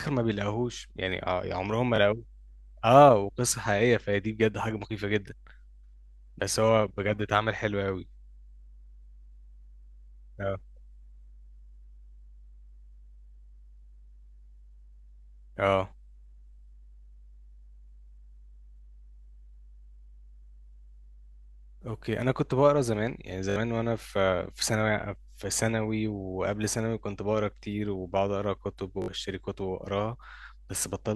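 Mains hum runs through the whole clip: power-line interference at 50 Hz leaks into the signal as a steady low drone, roughly 25 dB below the speech. Repeated buffers occur at 1.96 s, 23.50 s and 29.02 s. Audio arrived late, so the device replayed its last 20 ms block, once at first and three extra times later. This causes a brief buzzing stutter and drops around 20 ms of speech at first and about 70 ms at each later one.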